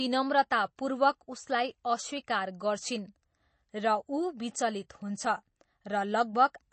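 Throughout, the speech carries MP3 compression damage, likely from a low-bitrate encode (around 32 kbps): nothing above 8.3 kHz, so a spectrogram shows a hard ceiling, with watery, swirly smearing on consonants.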